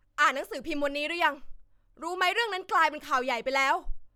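No audible technical faults occur anywhere in the recording.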